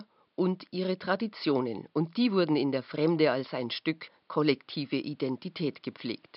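Nothing stood out on listening to the speech, with the room's background noise sitting about 45 dB below the voice.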